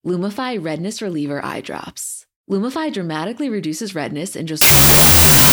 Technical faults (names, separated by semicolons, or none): wrong sample width